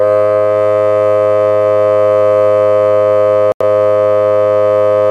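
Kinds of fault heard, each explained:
Digital broadcast dropout: The receiver stopped getting usable frames, either because the signal went or the data failed its error check, so it muted until clean frames arrived again. Here the music drops out at 3.52 s and comes back at 3.61 s, leaving a silent hole of roughly 85 ms. That length fits a couple of lost frames, and whatever was playing in that gap is simply gone rather than delayed.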